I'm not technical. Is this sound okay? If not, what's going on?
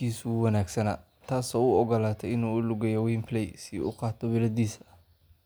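Yes, the recording is in good technical shape, with nothing wrong anywhere in the audio.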